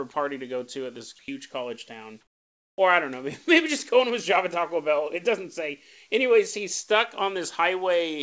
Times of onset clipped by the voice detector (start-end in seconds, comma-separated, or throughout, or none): 2.76-2.78